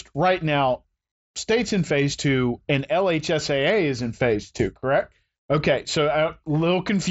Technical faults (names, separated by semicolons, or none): none